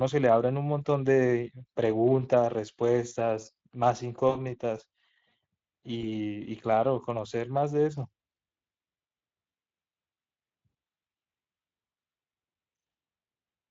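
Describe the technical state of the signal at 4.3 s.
A buzzy, smeared tone that fades out briefly replaces the sound from 4.29 to 4.36 s, with the audio staying weak for a moment after. This is VoIP packet loss concealed by the speech codec. Around 60 ms of data, consistent with three lost 20 ms frames, went missing, and the decoder kept extending its last pitch and filter at falling gain.

Throughout, the speech has a hoarse, noisy graininess from the Speex codec. Its CELP coding has limited bits for the excitation at a rate that suggests roughly 21 kbps, so the damage is plainly audible.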